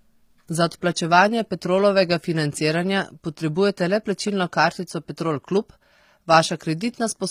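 The speech was likely passed through HE-AAC compression at a low bitrate, something on the order of 24 kbps. Only the lower band is truly coded, and the treble is rebuilt by copying lower content upward under a coarse envelope. From start to finish the top end sounds bright but synthetic, with harmonics that do not line up above the crossover. The s sounds come out gritty, metallic or lispy, and the damage is plainly audible throughout.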